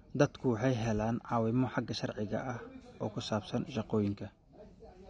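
From start to finish the speech carries AAC compression damage: dull, smeared and warbly, with fizzy sibilants, likely from AAC-LC at a low bitrate around 32 kbps.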